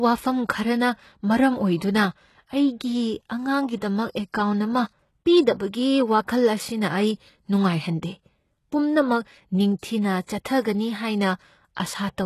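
A speech recording, heavily damaged throughout by what is likely HE-AAC compression. The treble is still present up to a hard ceiling at 12.3 kHz, but it sounds synthetic: sibilants come out gritty and lispy, with a metallic sheen that does not match the body of the voice. That fits spectral band replication at a very low bitrate, around 16 kbps, where the upper band is copied from lower frequencies and shaped only roughly. Plain band-limiting would sound dull rather than falsely bright. From 10.25 to 10.28 s there is pre-echo: a brief hiss leads into a sharp attack by about 30 ms, and the onset itself sounds softened. The codec spread its quantisation noise across the whole transform block, including the quiet stretch before the transient. Unlike a click, this is a short noise smear. Unlike reverb, it comes before the attack rather than trailing after it.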